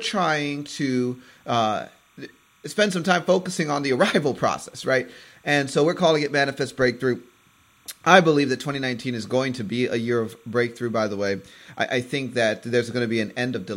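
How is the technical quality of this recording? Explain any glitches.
There's one problem that runs throughout the speech: timecode bleed. Linear timecode is leaking in, warbling between roughly 1 and 2 kHz, quiet but constant, at a rate fitting 29.97 fps code.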